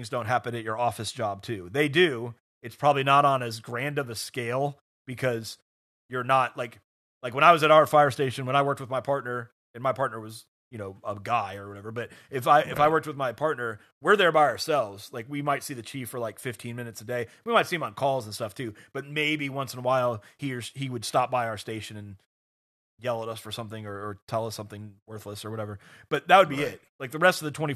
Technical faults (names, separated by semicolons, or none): none